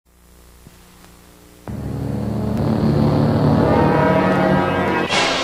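At 2.58 to 2.61 s and again at 4.88 to 4.91 s there's damaged data in the compressed stream. Each time the decoder hits bad bytes, can't read those frames, and hunts for the next clean header, leaving a quick 32 ms chirp or blip.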